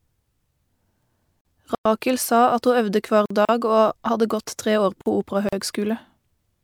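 Gaps at joins of encoded pieces at 1.41, 3.45 and 5.49 s, about 40 ms each and recurring every 2.0 s: separately encoded speech segments were joined with their encoder delay and padding intact, opening brief holes. Blocks of digital silence at 1.75 s (104 ms), 3.26 s and 5.01 s (46 ms each, fitting a 2048-sample buffer): unfilled output buffers dropped to zero, cutting the sound out and back with no fade.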